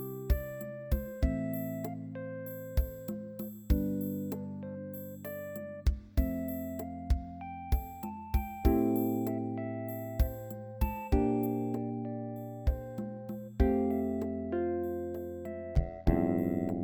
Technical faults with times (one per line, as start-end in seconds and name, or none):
0.00-11.46 pre-emphasis left on
15.75-16.83 overlap-add ripple